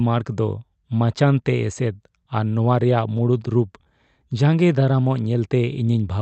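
A speech recording carried over an Opus call link, with content cutting off near 8 kHz on a spectrogram, it suffers clock drift between sender and receiver. The sending clock runs slow by roughly 2 percent, so the receiver's jitter buffer keeps running low. On a spectrogram the drift shows no single dramatic mark. Instead, tiny discontinuities appear in harmonic tracks, and slightly stretched syllables accumulate. The overall delivery plays at about 98 percent of natural speed.

The repeated timing corrections run from 0.12 s to 6.17 s. To make up the shortfall, the receiver repeats short slices of audio at uneven intervals, always lengthening rather than cutting, and adds something like 150 ms in total. Each repeat is small and heard only as a slight hiccup or unsteady tempo. In the waveform these appear as short duplicated cycles and mismatched splice points scattered through the clip. 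On the spectrogram, faint vertical seams interrupt the harmonics.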